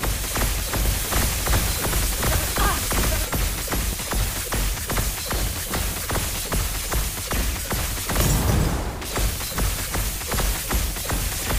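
From 0.85 s to 3.25 s a doubled audio track is heard. A second full-band copy of the sound runs about 0.7 s behind the first, at roughly the same loudness, so every event is heard twice. There is no decay and no room colour. The likely cause is a second capture over a slower path, or an edit that leaves two copies out of step. On a spectrogram every onset appears again about 0.7 s later, and the copy starts and stops with hard vertical edges.

At 3.93 s and again at 7.92 s there is audio missing between chunks. A sliver of roughly 7 ms is lost, and the two sides butt together with no silence. Each one is heard as a tiny skip. The likely cause is a processor that drops a few milliseconds while closing one chunk and opening the next, which fits chunks of about 2 s. On the waveform each shows as a sudden jump in the trace, and on the spectrogram as a thin vertical line.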